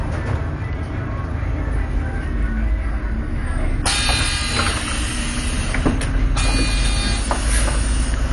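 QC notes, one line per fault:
Throughout, MP2 compression: nothing above 11.3 kHz. The sound is dull, with gurgling, granular distortion. This likely comes from bit-starved upper sub-bands switching off, which fits a bitrate near 48 kbps.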